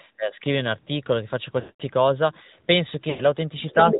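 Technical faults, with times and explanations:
Throughout: AMR narrowband mobile codec. The speech has passed through AMR-NB at a rate that fits 10.2 kbps. Nothing above 4 kHz survives, so the voice sounds muffled and boxy. The codec rebuilds speech from a vocal tract model driven by a few pulses per subframe. At this rate that model is plainly audible. Voiced sounds take on a buzzy, synthetic edge, and the consonants lose their crispness.
1.60 to 1.82 s and 3.10 to 3.21 s: lost AMR speech frames. Two runs of speech frames went missing, about 200 ms and then about 100 ms of sound. The decoder filled each gap by repeating the last good pitch and vocal tract settings at falling gain. The voice stretches into a smeared, droning tone and fades toward silence, most fully in the longer gap. It then returns weak and rough for a moment.
3.68 to 3.99 s: other side's voice leaking through. A second voice appears under the talker near the end of the clip. 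It sits at roughly 5 dB below the main speech. The likely cause is the far end's voice playing from the talker's loudspeaker. The echo canceller did not fully remove it before the microphone signal was sent.
3.88 to 3.99 s: speech suppressed in double talk. In the last tenth of a second the talker's voice dips, by about 5 dB at its deepest. This happens while the leaked second voice is also present. The main speech sounds pushed back. The likely cause is an echo canceller that could not separate the talker from the loudspeaker echo. It turned both down at once.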